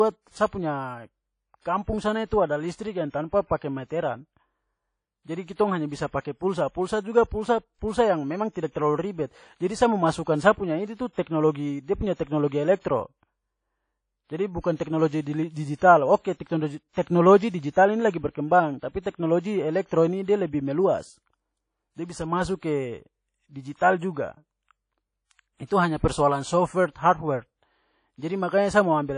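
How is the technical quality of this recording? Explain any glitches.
The recording is clearly degraded by lossy coding throughout, with four brief pre-echo smears in the middle section.

Across the whole speech clip there is a washy, ringing quality and a hiss that swells and fades with the talker, and nothing is present above 10.1 kHz. This is likely WMA compression at a low bitrate, around 32 kbps. Long transform blocks spread quantisation noise over tens of milliseconds, and weak components are zeroed. Unlike broadband background noise, this hiss tracks the signal rather than sitting steady.

Pre-echo occurs at 14.76–14.80 s (36 ms), 15.21–15.26 s (53 ms), 17.02–17.07 s (45 ms, just before "digital ini") and 18.11–18.14 s (32 ms, between "digital ini" and "berkembang tapi teknologi elektro"). A sharp onset late in a block spreads its noise backward, so a short hiss arrives before each attack and the attack itself sounds softened. 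Reverb or echo trails after a sound, but this precedes it.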